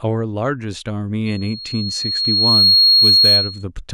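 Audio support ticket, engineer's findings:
Loudspeaker feedback squeal, 1.26–3.64 s. Mic picking up its own monitor/PA speaker; loop gain above unity at 4.3 kHz. Single 4.3 kHz tone grows over roughly 1.5 s, ends about 10 dB above the speech. Check mic placement and gain, and notch 4.3 kHz.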